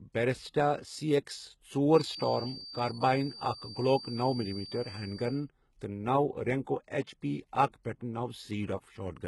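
A speech recording with treble that sounds synthetic rather than captured: heavy coding damage leaves sibilants gritty and metallic, with upper harmonics that don't line up with the lower spectrum. This is likely HE-AAC compression, where the upper band is rebuilt by spectral band replication from copied lower bands, and it fits a bitrate around 16 kbps. From 1.86 s to 5.48 s, starting just after "سی ایکس", a thin steady tone at 4.6 kHz sits roughly 15 dB below the speech and swells and fades slowly. That is likely a feedback whistle, with the loudspeaker-to-microphone loop hovering at the edge of oscillation without building into a howl. At 7.02 s to 7.07 s a 57 ms hiss runs ahead of an attack and softens its onset. This is pre-echo: the codec spread quantisation noise sized for the loud transient across its whole block, so the quiet gap before the attack fills with noise.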